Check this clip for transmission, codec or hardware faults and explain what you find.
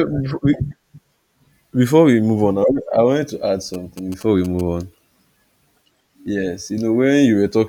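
One fault: GSM signalling bursts, 3.74 to 4.61 s. A nearby 2G phone's short radio bursts are rectified by the audio circuitry, giving galloping ticks and brief 217 Hz buzzes about 20 dB below the speech. A spectrogram shows vertical stripes spaced at 217 Hz; the waveform shows clustered spikes.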